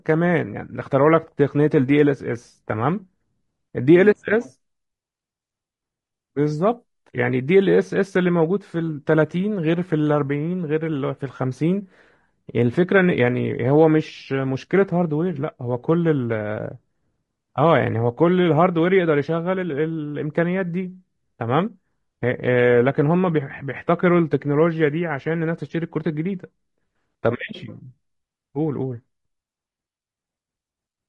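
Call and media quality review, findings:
Likely low-delay AAC compression (AAC-ELD) at a low bitrate, consistent with about 32 kbps, throughout: short frames blur pitch harmonics, so speech turns rough and grainy, with noise filling between harmonics and a dulled, synthetic-sounding top band.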